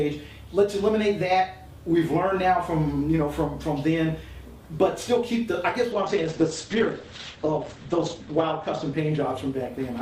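From 5.93 s onward the audio turns rough and muffled, cut off at 8 kHz. This is a call bitrate drop, consistent with the encoder falling from 64 to 9 kbps.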